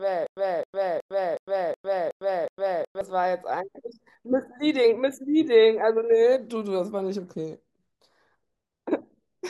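From the very first instant until about 3.01 s, the speech is caught in a stutter with silent gaps, already under way when the clip begins. A fragment of about 0.26 s repeats seven times, each followed by roughly 0.10 s of dead digital silence, so the burst returns every 0.37 s at a steady pace. The likely cause is a stalled player or stream that replayed its last buffered piece at each retry before running empty, and the speech due in that stretch is lost. Unlike simple dropouts, the same sound keeps coming back. Unlike a seamless loop, there is silence between repeats.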